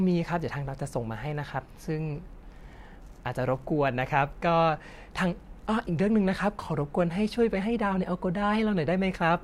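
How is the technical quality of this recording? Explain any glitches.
The technical quality of this recording is sound, with no glitches to explain.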